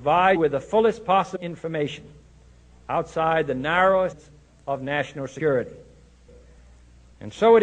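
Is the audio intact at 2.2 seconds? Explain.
Yes, at 2.2 seconds the audio is intact, with no dropout, click, distortion or other fault to be heard at that moment.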